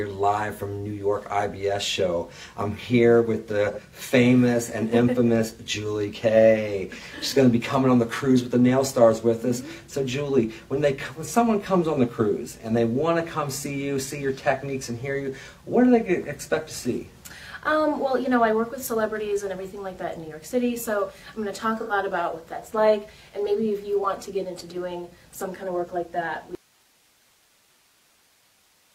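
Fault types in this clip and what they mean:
AAC frame loss with concealment: Pieces of the coded stream went missing, and the decoder filled them from the last good spectrum. Brief smeared, noisy patches appear at 3.72, 7.18 and 21.81 s. The first two last about 43 ms, fitting one lost frame. The third lasts about 85 ms, fitting two.
Audio dropout to a faint residue: At 26.55 s the sound cuts out abruptly and never returns. The gap holds only hiss, roughly 40 dB below the earlier level. The likely cause is the source signal breaking while the path after it stayed live.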